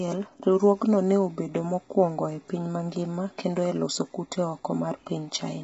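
Speech, with heavy low-delay AAC compression throughout. The voice sounds rough and grainy, and nothing reaches above 7.8 kHz. This likely comes from AAC-ELD at a low bitrate, around 16 kbps.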